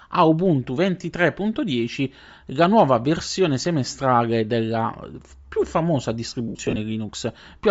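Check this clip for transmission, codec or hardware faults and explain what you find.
Two faults are present: codec damage across the whole speech clip, and a short burst of dropouts near the end.

Bluetooth LC3 compression runs throughout. The speech has a breathy, grainy upper edge. The encoder discards much of the high band and refills it with noise. This is likely LC3 at a low rate, which fits roughly 32 kbps with 10 ms frames.

Lost LE Audio frames occur from 6.48 to 6.78 s. About 160 ms of audio goes missing, scattered across that 280 ms span, with the longest gap around 70 ms. The decoder repeats the last spectrum with scrambled phase, fading it after the first few frames.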